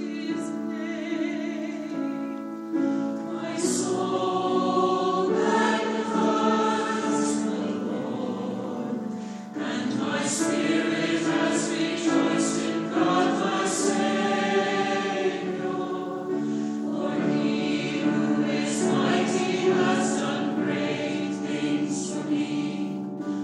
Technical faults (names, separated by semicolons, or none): none